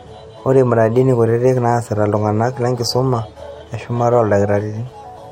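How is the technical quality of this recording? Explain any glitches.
No technical faults can be heard anywhere in the recording, so there are no glitches to explain.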